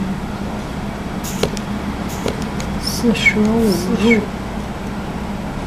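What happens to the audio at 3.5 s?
At 3.5 s the sound is doubled. This doubled audio track runs from 1.70 s to 4.24 s. A second, full-band copy of the audio trails the original by about one second. It sits about 5 dB quieter. It carries no decay or room colour, so it reads as a clean repeat rather than an echo. It starts and stops abruptly. The likely cause is a second capture through a slower path, mixed back in out of step.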